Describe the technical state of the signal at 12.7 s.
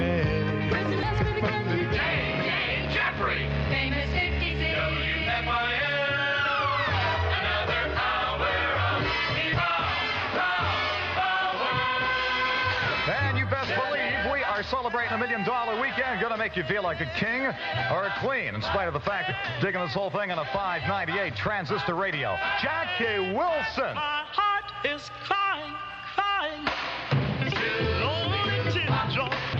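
At 12.7 s the signal is intact, with no dropout, distortion, glitch or other fault to be heard.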